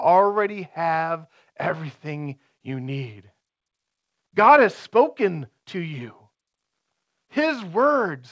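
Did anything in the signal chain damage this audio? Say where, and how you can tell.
No, nothing stood out on listening, and the speech simply stops at about 8 kHz, which is the normal band limit of the G.722 call path it came through.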